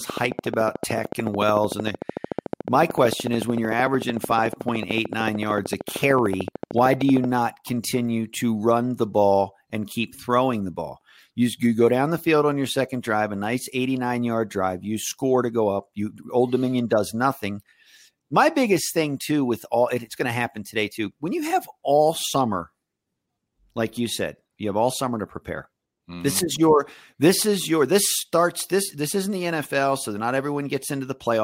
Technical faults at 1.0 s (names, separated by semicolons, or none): train of clicks